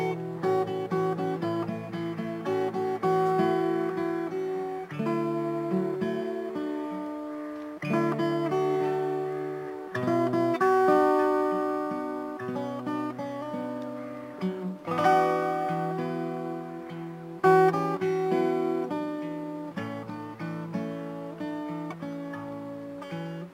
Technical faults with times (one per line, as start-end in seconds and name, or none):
0.00-23.53 crude rate conversion